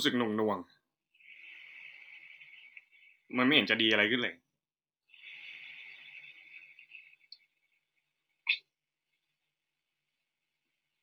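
No technical faults are audible.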